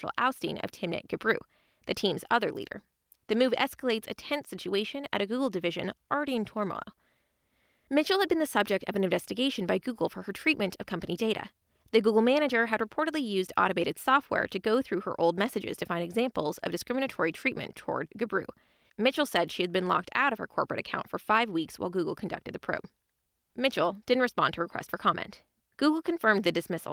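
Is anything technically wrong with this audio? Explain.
No, the speech recording shows no technical faults that a listener can pick out.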